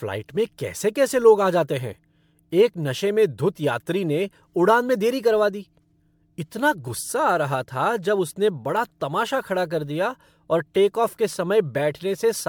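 Throughout the speech there is generation loss: the sound is swirly, smeared and hollow, with consonant attacks blurred and a thin, phasey character well beyond what a single encode would leave. The likely cause is repeated lossy coding, with the audio passed through an MP3 chain at a setting consistent with 128 kbit/s around seven times, each pass re-quantising on a shifted frame grid so noise and spectral holes accumulate. One encode at that rate would sound far cleaner. Content reaches up to 20 kHz, so this is not a low-bitrate band-limit.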